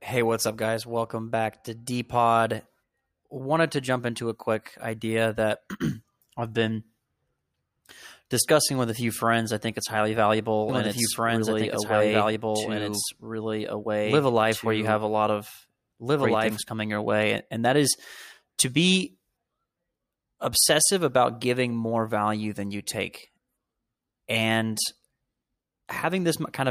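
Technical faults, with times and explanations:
10.69–16.57 s, doubled audio track: just after "I think it's highly", a second full-band copy of the speech runs about two seconds behind the original at roughly the same level, until it cuts off abruptly before "coming your way". The likely cause is a slower capture path or an edit holding two copies out of step. The copy is dry, with no decay or room colouring. On a spectrogram, the speech patterns reappear two seconds later, overlapping the live signal, with hard vertical edges where the copy starts and stops.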